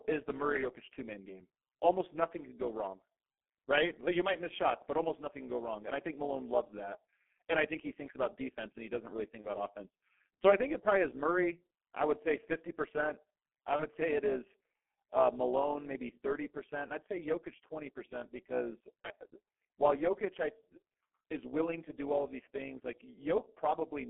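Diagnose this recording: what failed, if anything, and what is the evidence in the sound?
A call-processing stage rebuilt the audio from windowed frames whose overlap does not sum to constant gain, producing overlap-add ripple. The level pumps by about 11 dB at around 200 Hz throughout, heard as a metallic buzz with extra tones riding on every syllable.

At the codec stage, the speech passed through a G.723.1 codec at a low rate, which fits roughly 6 kbit/s. The band is held to about 200 Hz to 3.4 kHz, and the heavy coding leaves the speech muffled and hoarse, with smeared consonants for the whole clip.

On the network side, VoIP packet loss was concealed by the speech codec three times: 9.41 to 9.50 s, right after "he doesn't really think"; 13.76 to 13.84 s, just before "say it is uh"; and 19.02 to 19.07 s. Each gap fits one lost 30 ms frame. The decoder extended its last pitch and filter, lowering the gain frame by frame, and the speech stays weak or distorted as it recovers.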